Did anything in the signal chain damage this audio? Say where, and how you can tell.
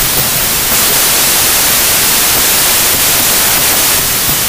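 Yes. Throughout, the speech sits buried under loud, harsh noise, running fast and high, about 1.33 times speed. That points to a wrong sample width at sample-format conversion: packed 24-bit data read as 32-bit, so bytes straddle samples and four-byte reads consume 3-byte frames too quickly.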